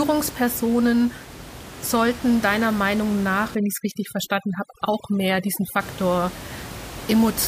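From 3.55 to 5.80 s, overdone noise removal leaves speech over a lowered, twinkling background, unlike the room noise, which sits about 15 dB below the speech.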